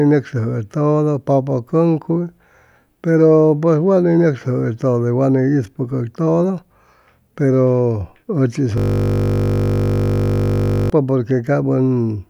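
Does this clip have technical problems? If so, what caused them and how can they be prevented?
Yes. From 8.78 to 10.90 s, a system hang loop: the computer or driver froze while the hardware kept cycling its ring buffer, replaying one 20 ms slice of speech as a steady 50 Hz buzz. A watchdog that mutes output when the audio thread stalls prevents it.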